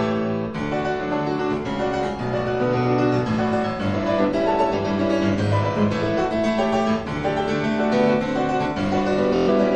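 From 9.36 to 9.49 s, a Bluetooth stutter: lost packets made the receiver replay its last short slice as a buzz, not silence, then the sound jumps ahead.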